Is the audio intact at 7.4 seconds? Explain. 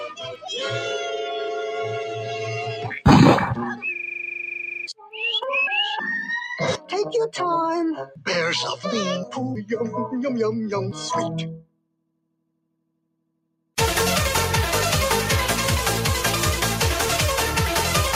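No. At 7.4 s, as through the whole clip, a speech-tuned noise suppressor treats held tones and tails as noise and pulls them down by around 10 dB, so the sound pumps, flutters or thins. Onsets stand out while sustains fade on the spectrogram and waveform envelope.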